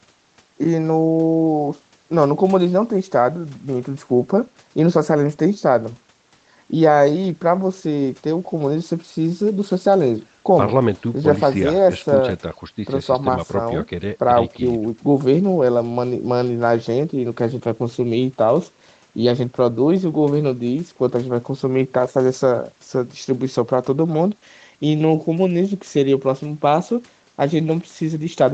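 From start to finish the speech carries clock drift between sender and receiver. The sender's clock runs roughly 5 percent fast, so the jitter buffer keeps overfilling. On a spectrogram this shows as an unevenly paced rhythm throughout.

Repeated timing corrections follow from that drift, running from 0.02 s to 28.53 s. The receiver keeps trimming short pieces at uneven intervals to hold the 105 percent pace, giving faint hiccups and a wobbly tempo. In the waveform these appear as small abrupt splices, and in the spectrogram as brief vertical seams where harmonics jump.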